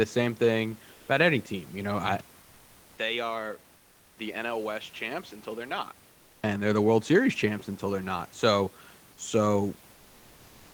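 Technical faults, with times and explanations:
2.21–6.44 s: input switched to a poorer device, likely; a 200 ms gap, then sound about 10 dB quieter with nothing above 7.6 kHz, a flat spectrogram ceiling.
3.77–4.17 s: comfort noise in place of the background, likely from Opus DTX; 400 ms of smooth, featureless noise about 3 dB lower, uniform grey on the spectrogram.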